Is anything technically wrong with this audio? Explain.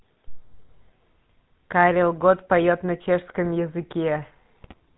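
Yes. Throughout, the speech carries GSM full-rate codec damage, plainly audible: the codec models the vocal tract and drives it with a sparse pulse excitation, keeping every third sample, at a rate that fits 13 kbps, and passes nothing above 4 kHz, so the voice sounds band-limited, buzzy and gravelly.

From 4.62 to 4.74 s, GSM bit errors hit the decoder at a rate of about 4 percent, corrupting filter, pitch and gain parameters over what sounds like several consecutive frames. The spectrum bends and the level jumps, giving a short burst of squawking and gargling.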